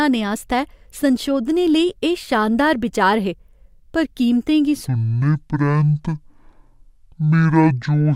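From 4.88 s to the end at 8.15 s, a section at the wrong speed plays at 0.53x. The speech drops about ten semitones, slow and deep, likely from a clock mismatch.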